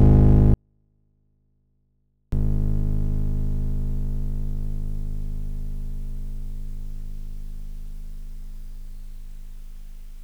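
From 0.54 s to 2.32 s the music drops abruptly to near silence: a 24-bit alignment error (too quiet). Samples held in the low 24 bits of a 32-bit word are being read as full 32-bit integers, so the signal stays clean but sits about 48 dB down.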